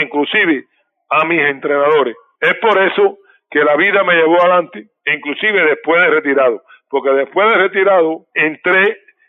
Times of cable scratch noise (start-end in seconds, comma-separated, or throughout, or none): none